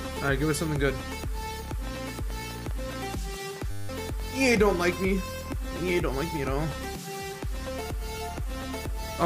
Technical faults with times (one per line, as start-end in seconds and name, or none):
1.87-4.84 train of clicks
3.71-3.89 system hang loop